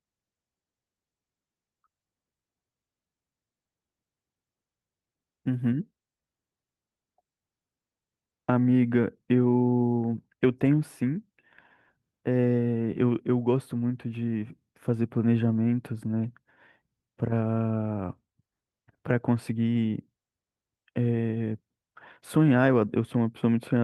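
No technical faults can be heard in this recording.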